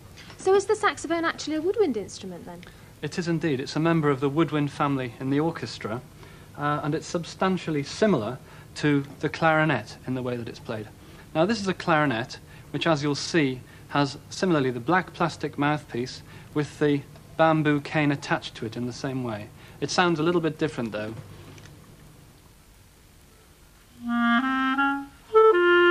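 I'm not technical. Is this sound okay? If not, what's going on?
Yes, nothing stood out as a problem when listening to it.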